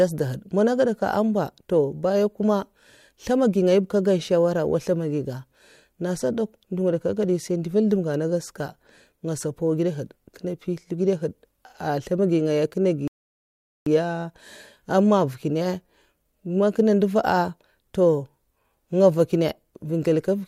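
At 13.08 s the speech halts in a rebuffering stall: the player drained its store of downloaded audio and waited for more to arrive, leaving about 0.79 s of silence until 13.86 s. Playback then picks up at exactly the point where it stopped, with nothing skipped or repeated. That continuity is what separates it from a dropout or packet loss, where audio is missing. Here the recording is intact and the only change is added time.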